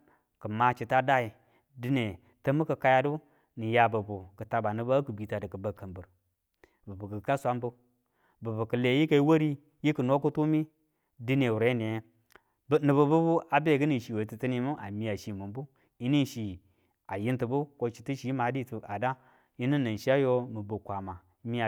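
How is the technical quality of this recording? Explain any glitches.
No technical glitches can be heard anywhere in this speech recording. There is nothing here that needs explaining.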